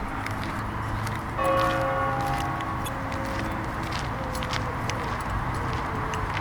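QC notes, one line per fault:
2.84–2.88 s, damaged data in a compressed stream: there's a quick glitch lasting about 44 ms. A stretch of the compressed data got mangled there, so the decoder misread those frames, lost its place, and had to hunt for the next clean frame header before normal playback resumed. That garbled decode plus the resync is what gives you the glitch.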